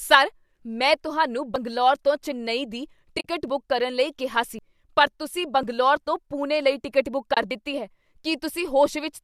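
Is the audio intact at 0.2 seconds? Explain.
Yes, the speech at 0.2 s is intact, with no fault at that moment.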